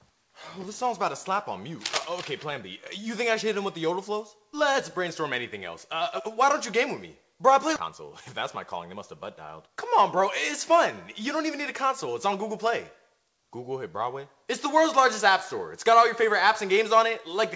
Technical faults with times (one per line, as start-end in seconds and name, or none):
7.76 skip ahead
9.47-10.26 jitter buffer speed-up
11.23-13.38 jitter buffer speed-up